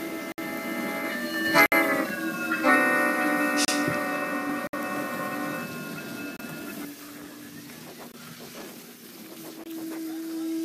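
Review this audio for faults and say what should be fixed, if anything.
Blocks of digital silence cut in at 0.32, 1.66, 3.65, 4.67, 6.37, 8.12 and 9.64 s, lasting 20 to 60 ms. The output buffer likely went unfilled, so the sound drops straight to zero and back, unlike a faded dropout. Giving the audio thread more buffer headroom and priority would prevent underruns like these.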